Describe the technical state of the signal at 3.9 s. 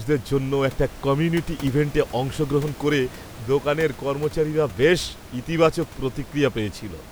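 At 3.9 s the speech signal is intact, with only the room's own background noise sitting about 18 dB below the speech.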